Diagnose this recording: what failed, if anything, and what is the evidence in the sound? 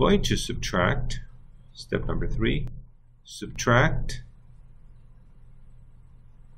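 From 2.68 to 3.56 s, sound and background noise drop together by about 7 dB: a sudden gain jump, likely a digital gain change applied without a ramp.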